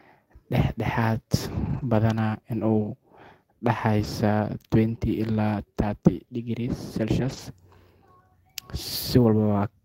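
Around 1.65 to 1.83 s the speech turns rough and a bit noisy, and the same thing happens briefly at 4.03 s, 4.91 to 4.97 s, 5.91 to 5.93 s and 7.21 to 7.39 s. That's lost packets rebuilt from error correction. Packets went missing, but each following packet carried a low-bitrate copy, so the decoder played those instead of leaving a hole. The longer stretches sound like about 100 ms of rebuilt audio. Right after, at 4.99 to 5.03 s, there's a short concealed packet loss. About 20 ms never arrived in time, so the receiver stretched the preceding sound to cover it and then blended back in, which you hear as a quick smear.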